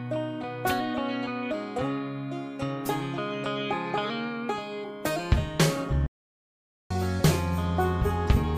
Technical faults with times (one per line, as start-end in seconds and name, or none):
6.06-6.91 playback stall